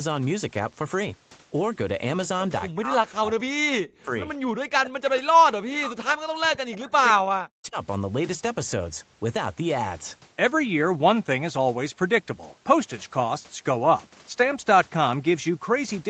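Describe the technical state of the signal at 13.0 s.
At 13.0 s the speech is intact, with no fault, just the normal band-limited sound of a call path whose content stops at about 8 kHz.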